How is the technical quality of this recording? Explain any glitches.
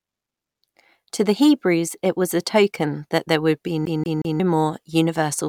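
There's one glitch, a CD stuck on one turn. Right after "that there would be", from about 3.85 to 4.40 s, a 0.18 s slice of the speech replays three times. A scratch keeps kicking the laser back a track, so you hear a quick, even stutter with tiny mutes at each jump.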